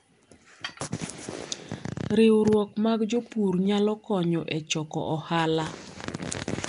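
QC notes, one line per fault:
Throughout, Nellymoser compression: the speech has a rough, hissy halo and a smeared, underwater quality. This is likely the Flash-era Nellymoser Asao codec, which codes short blocks with a fixed bit budget and fills starved bands with noise. The level of damage points to a rate near 44 kbps. On a spectrogram, content stops at about 10.6 kHz, and the upper bands look grainy and noise-speckled rather than showing clean harmonics.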